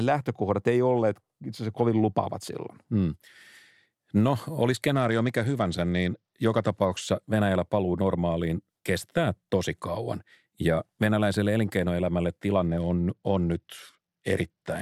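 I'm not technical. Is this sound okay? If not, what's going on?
No. The speech briefly loses its sparkle from 4.94 to 7.02 seconds, and again from 12.69 seconds to the end. It turns dull and gritty. This is a Bluetooth SBC bit pool drop: a busy wireless link forced the phone to squeeze the sound harder.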